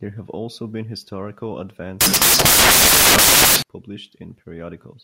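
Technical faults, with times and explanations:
2.01 to 3.62 s, samples built from the wrong bytes: for about 1.6 s the speech gives way to loud, hissing noise that fills the whole band, close to white where the speech is loud. The reader has assembled each sample from misplaced bytes, whether offset by one, swapped in order or misaligned, so the rapidly changing low-order bits land in the high-order position and dominate every value, turning the waveform into something close to random noise.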